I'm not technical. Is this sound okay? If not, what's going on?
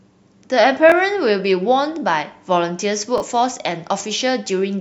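No. There are two repeated buffers, at 0.90 to 0.92 s and 3.18 to 3.20 s. Fresh speech arrived late, so a tiny 21 ms chunk replayed, causing brief stutters.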